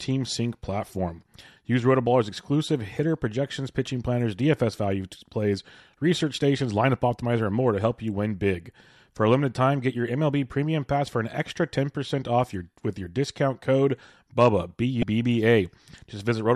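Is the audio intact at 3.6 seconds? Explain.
Yes, the speech at 3.6 seconds is intact, with no fault heard at that moment.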